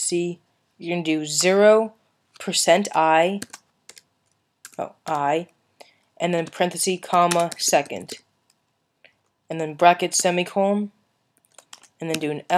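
No technical faults are audible anywhere in the audio.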